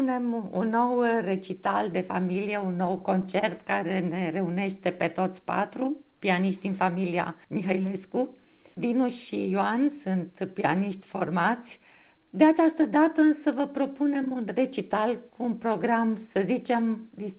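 From 2.34 to 3.45 s there is a run of scattered short gaps: packets went missing one at a time, and the receiver covered each hole by stretching the last bit of sound. There are around seven such patches, none longer than about 10 ms, adding up to roughly 70 ms. They sound like brief ticks and small smears. A single long dropout would instead leave one obvious stall, and a loss burst would smear a whole chunk. The band stops at 4 kHz, which fits a G.711 A-law call path.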